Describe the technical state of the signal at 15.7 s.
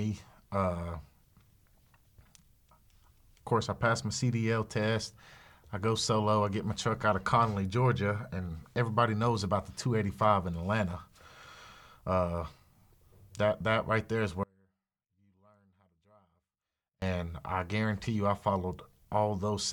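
At 15.7 s the speech is in an audio dropout to a faint residue. It runs from 14.43 to 17.02 s, after "that right there is" and before "I guarantee you I". The wanted signal likely broke off while the path stayed live. Only faint sound remains, around 35 dB down.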